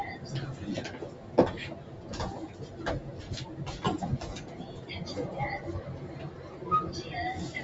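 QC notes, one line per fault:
Throughout: noise suppressor applied to sounds. A speech-oriented suppressor treats steady tones and tails as noise, so levels swing by around 10 dB and the sound pumps and thins.
1.1–1.35 s and 1.82–2.05 s: sound cut by the noise suppressor. Sustained or decaying sound was classed as noise and pulled down by about 4 dB, dipping briefly while onsets survive.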